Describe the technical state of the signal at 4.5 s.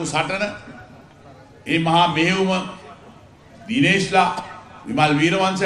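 At 4.5 s the signal is intact, with no dropout, distortion or other fault to be heard.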